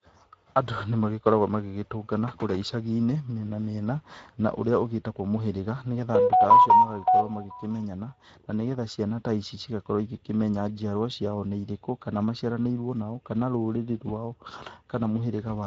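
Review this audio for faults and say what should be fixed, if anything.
Speex codec damage throughout the speech: the thin excitation budget, fitting a bitrate near 16.8 kbps, leaves the voice audibly noisy and hoarse, with nothing above 7.7 kHz. Prevent it by using a higher Speex quality setting or a modern codec such as Opus.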